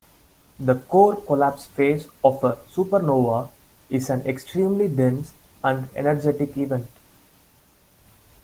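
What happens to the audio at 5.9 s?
Nothing goes wrong at 5.9 s: the speech there runs on intact, with no dropout, click or other fault.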